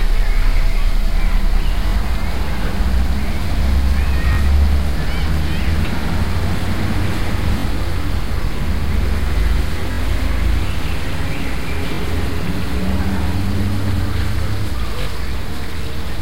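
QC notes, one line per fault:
1.88, 4.33, 7.59, 9.92, 11.95 and 15.02 s, Bluetooth stutter: each is a quick buzzy catch where a tiny slice of sound repeats for about 50 ms (closer to 80 ms at 9.92 s). The receiver lost or got late audio packets and kept looping its last buffer until data showed up again. When the sound comes back it has skipped ahead about 43 ms (about 64 ms at 9.92 s), which fits two dropped frames, or three on the longer one.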